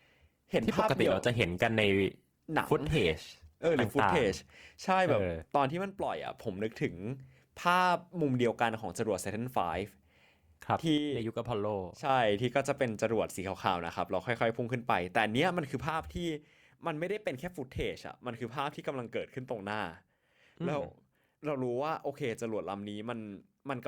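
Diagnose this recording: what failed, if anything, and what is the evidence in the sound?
Adaptive stream starting at a low bitrate, at the network stage: from 0 to 4.0 s the speech sounds thin and smeared, which fits a low Opus rate near 16 kbit/s. At 4.0 s it jumps cleanly to full detail, with no gap. On a spectrogram the upper band then fills in abruptly.

One channel drops out at 5.70–6.26 s, 10.98–12.09 s and from 15.89 s to the end. The level steps down by about 6 dB each time, seen as sudden waveform envelope steps, likely from an intermittent analogue connection.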